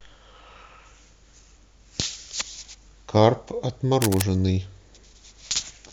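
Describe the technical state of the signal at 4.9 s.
At 4.9 s the speech signal is intact, with no fault present at that moment.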